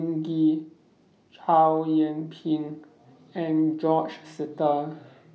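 Nothing in this speech recording points to a technical fault; the signal holds steady and continuous throughout.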